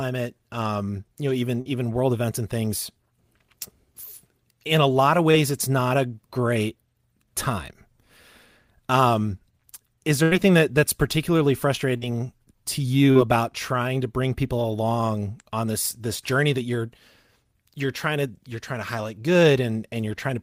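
At 1.61 to 1.67 s, then 5.31 to 5.35 s, the speech shows short concealed packet loss. Roughly 40 ms and then 20 ms of the stream arrived too late to decode, and the receiver covered each hole by extending the preceding sound before blending back. Each is heard as a brief smear or wobble. On a spectrogram, the harmonics or noise texture run unnaturally steady for a few frames, and the waveform shows a repeated, slightly too regular stretch.

At 10.23 to 10.33 s comes a burst of packet loss. About 80 ms went missing in a row, and the decoder kept extrapolating the last sound while lowering its level, giving a held buzz or hiss that fades before the speech resumes partway on. On a spectrogram, frozen spectral content dims toward the gap's end, then jumps abruptly. The waveform envelope tapers, then restarts.

Short concealed packet loss returns at 11.97 to 12.03 s and 13.11 to 13.17 s, each about 40 ms. 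Both bring the same brief smearing and show the same stretch of copied, overly uniform texture.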